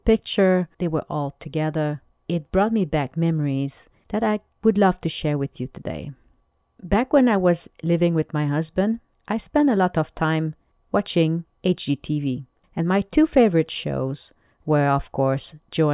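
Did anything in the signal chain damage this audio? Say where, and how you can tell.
No, nothing in the signal chain audibly damaged this audio.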